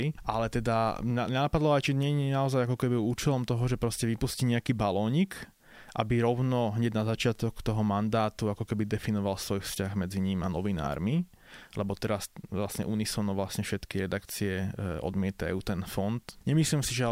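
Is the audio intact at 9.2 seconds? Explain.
No. Low bit depth with dither runs through the whole clip: 10-bit rounding with dither turns the error into a steady, even hiss, roughly 40 dB below the speech.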